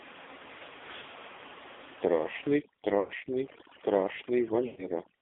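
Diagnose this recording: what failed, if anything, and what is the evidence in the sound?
The codec stage shows an AMR narrowband mobile codec with heavy damage throughout. The speech sits in a band from 250 Hz to 3.6 kHz and sounds buzzy and synthetic, as a vocal-tract model driven by sparse pulses rebuilds it. That fits a low mode around 5.9 kbps. On a spectrogram, everything above 3.6 kHz is empty and the low end is cut below 250 Hz. Harmonics look smeared and grainy rather than cleanly striated.

At the network stage, lost AMR speech frames cause three dropouts: 0.96 to 1.05 s, 3.00 to 3.13 s, and 4.66 to 4.91 s. Each one stretches the sound into a buzzy smear that fades toward silence. The concealed stretches last about 80 ms, 100 ms and 120 ms, which fits runs of four, five and six 20 ms frames. After each gap the speech returns weak and rough. The waveform shows decaying envelopes, and the spectrogram shows frozen formant bands fading out.

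In call processing, overdone noise removal runs from 2.52 s to the end. The room noise, which otherwise sits about 14 dB below the speech, collapses to near silence scattered with twinkling specks. Quiet parts of the speech get gated away. This happens because bands near the noise estimate are pushed far down or off. On a spectrogram the floor turns black with isolated dots, and speech edges look chewed into blocks.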